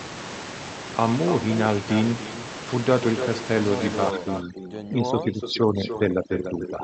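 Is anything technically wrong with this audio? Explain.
Yes, two things. Throughout, there's echo with no canceller: the far end's loudspeaker feeds its microphone, and the speech returns roughly a third of a second later, about 10 dB down, as a thinner shadow trailing everything said.

From 4.11 s to the end, overdone noise removal kicks in. The suppressor is set too hard, so bands near its noise estimate get switched off. The room noise drops and breaks up into twinkling specks.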